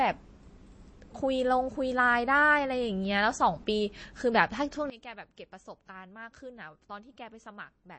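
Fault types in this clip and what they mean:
MP3 compression: Watery, swirly speech with nothing above 8.4 kHz throughout, likely from MP3 encoding at a low bitrate, which fits about 32 kbps.
sudden gain jump: At 4.90 s, speech and background noise drop together by about 18 dB and stay down, likely a digital gain change applied without a ramp.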